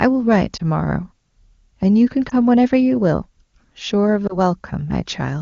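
Three short dropouts occur in the speech, at 0.57 s, 2.29 s and 4.27 s. Each is a case of lost AMR speech frames. Corrupted frames were discarded, and the decoder filled the gap by repeating its last good pitch and vocal tract settings at reduced gain. Each gap sounds like a brief dip or warble consistent with a single 20 ms frame. The disturbance lasts about 30 to 40 ms in the first two and about 0.1 s in the third, all within AMR wideband speech that otherwise sounds clean.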